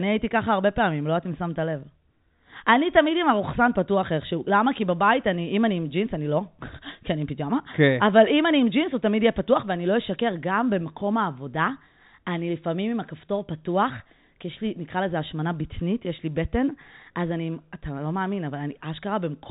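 No technical faults are audible.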